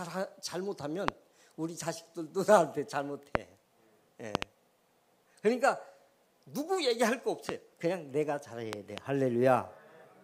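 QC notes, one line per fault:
1.08 to 9.00 s, loud pop: single sharp pops at 1.08–1.10 s and 3.35–3.37 s peak about 25 dB above the signal. There is a double pop at 4.35–4.44 s, a single at 7.49–7.51 s and a double at 8.73–9.00 s, each about 20 dB up. The sound continues underneath. These are likely brief voltage pulses from a switch, static or driver glitch.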